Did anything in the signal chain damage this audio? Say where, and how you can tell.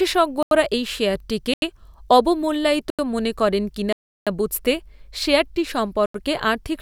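Yes. The speech cuts abruptly into holes at 0.43, 1.54 s (after "এই শেয়ারটিকে"), 2.90, 3.93 and 6.06 s. These are blocks of digital silence, each 85 ms long except a 340 ms one. At the driver or buffer stage, output buffers weren't filled in time and were zeroed. The lengths fit a 4096-sample buffer, with the long gap matching four of them.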